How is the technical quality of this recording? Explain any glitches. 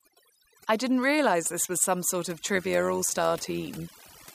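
The technical quality is poor, with two processing faults.

Throughout the recording, the background has dropped and broken up into twinkling specks. This is overdone noise removal: the noise reduction was set too aggressively, pulling individual frequency bands down whenever they approached its noise estimate and taking quieter parts of the speech with them.

From 2.55 s, just after "was some sort of", to the end at 4.34 s, the speech takes on a metallic buzz. This is overlap-add ripple: the audio was split into windowed frames and rejoined with overlaps that don't sum evenly, so the level swings by about 6 dB once per frame, at a rate around 100 Hz.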